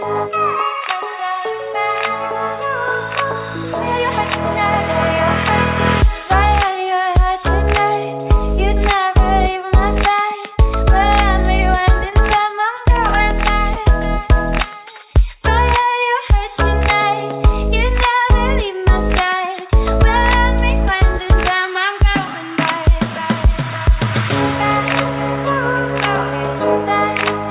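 At 12.10 to 12.14 s and again at 13.74 to 13.77 s you get short concealed packet loss. About 20 ms of audio didn't reach the decoder in time both times, so the receiver patched the gap by stretching out the preceding sound and then blending back in. Each one comes across as a tiny smear or wobble. The band stops at 4 kHz, which fits a G.711 mu-law call path.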